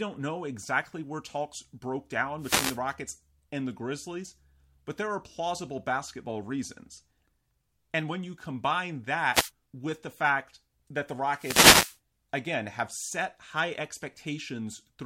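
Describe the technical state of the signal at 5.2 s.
At 5.2 s the speech signal is intact, with no audible fault at that moment.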